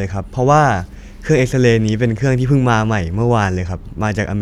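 No technical faults can be heard anywhere in the speech. At no point does the sound reveal a moment where the recording or playback chain went wrong.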